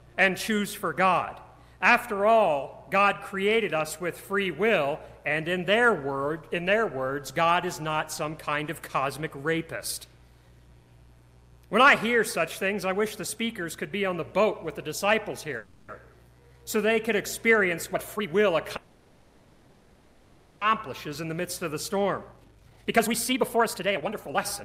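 At 15.57 s the sound stalls for about 310 ms, running on as a fading buzzy hiss before resuming from exactly where it stopped. That's a call audio freeze, likely from packets held up in transit until the jitter buffer ran dry, so the gap is added and nothing is lost.

Right after, from 16.12 to 16.15 s, there's a skip ahead. Roughly a tenth of a second of audio is simply dropped, and the two sides butt together with almost no gap, so you hear a small forward jump.

From 16.40 to 16.94 s comes a jitter buffer slow-down. The receiver repeats tiny pitch-period slices to stretch 96 ms into the stream, so the sound drags at 84% speed with the same pitch and a slightly smeared, drawn-out quality.

Then a jitter buffer speed-up runs from 17.61 to 18.49 s. Small pieces are trimmed out, about a fifth of a second in total, so the audio hurries along at 120% without changing pitch.

At 18.76 s there's a much longer call audio freeze, lasting 1.85 s until 20.63 s. 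The last sound smears into a decaying buzz and hiss while the stream waits, likely on delayed packets, then resumes with nothing missing.

To shed that built-up delay, a second jitter buffer speed-up starts at 21.07 s and runs to the end at 143% speed. Around a second and a half gets cut, and the audio sounds noticeably rushed though the pitch stays put.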